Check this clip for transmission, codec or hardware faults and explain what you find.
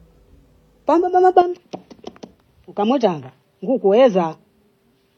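Two faults are present: a chained lossy coding stage that colours the whole clip, and an input change partway through the speech.

Transcoding between lossy codecs runs throughout. The speech carries two overlapping kinds of artefact: swirly, smeared high-frequency texture alongside the watery, synthetic brightness of spectral band replication. The sound points to an MP3 stage at around 32 kbit/s, likely re-encoded afterwards with HE-AAC at around 40 kbit/s. The second encoder spends its bits reproducing the first one's damage and then adds its own. A single low-bitrate encode would show only one signature, not both layered together.

Input switched to a poorer device at 1.42 s, lasting to the end. With no gap at the switch, the speech becomes duller and boxier, with nothing above 6.2 kHz. It also drops by about 10 dB, and a faint new noise floor appears well below the speech. This is likely a change to another microphone or a headset's call profile, which passes a narrower band and has its own tone and level. 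A codec-side bandwidth drop would not also change the level, timbre and background noise at the same instant.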